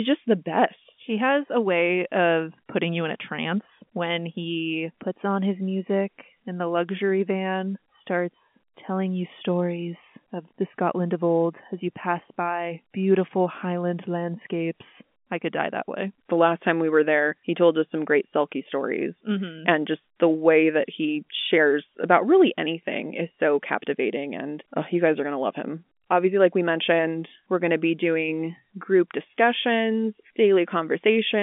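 No technical faults can be heard in this speech, which comes through an ordinary telephone-line band with nothing above 3.7 kHz.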